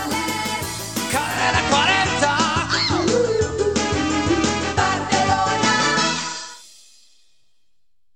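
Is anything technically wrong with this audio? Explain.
Yes. From 1.25 to 6.65 s the sound turns hissier, with hiss about 35 dB down and a level shift of about 4 dB. This is digital radio blending to analogue: the receiver cross-faded over 222 ms to FM and later returned.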